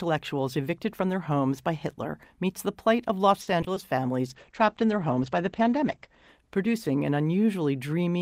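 From 3.41 to 3.78 s, packets were lost or arrived late over and over, a case of repeated packet loss. Each of four holes was patched by extending the preceding sound, the longest gap lasting 60 ms, so about 30% of that stretch is concealment rather than real audio. The speech turns choppy, with a stuttering edge where pieces drop out.

At 4.27 s a call bitrate drop begins and lasts to the end of the clip. The bandwidth estimate fell sharply, and the encoder switched to far fewer bits. The sound points to a fall from around 64 kbps to around 11 kbps, staying at its lowest for 1.77 s. The audio bandwidth shrinks from 20 kHz to 8 kHz, so the speech loses its brightness and becomes muffled, rough and watery.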